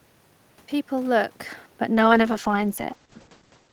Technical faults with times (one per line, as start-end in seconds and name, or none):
1.94-3.72 call bitrate drop